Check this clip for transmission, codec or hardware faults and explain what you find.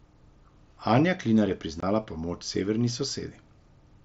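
One transmission fault is present: unconcealed Bluetooth headset packet loss from 1.80 to 1.83 s, just before "premoč severni". About 22.5 ms of speech is missing, which fits three consecutive 7.5 ms packets dropped on the link between headset and phone. Nothing patched the gap, so silence or an idle pattern replaced the lost audio. The speech stops and restarts with hard edges, heard as a brief hole. Outside the gap, the mSBC wideband coding adds light graininess.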